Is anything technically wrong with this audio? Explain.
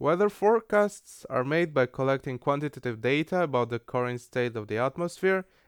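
No, nothing technically wrong here.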